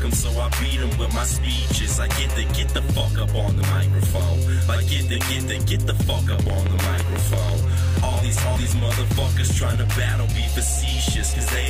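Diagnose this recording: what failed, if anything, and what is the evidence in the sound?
Audio missing between chunks at 3.61 s and 8.56 s, about 5 s apart. Each skip drops around 50 ms with no silence. This is likely buffer or storage handover between chunks.

A train of clicks runs from 6.33 to 7.50 s, about seven regular ticks at 6.04 per second, peaking roughly 10 dB above the sound. This likely comes from interference in the analogue wiring or a faulty connection or power supply.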